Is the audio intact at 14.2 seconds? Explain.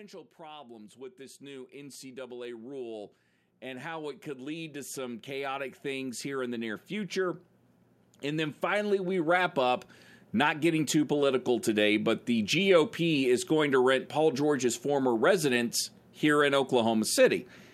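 Yes, at 14.2 seconds the speech plays through intact with no audible fault.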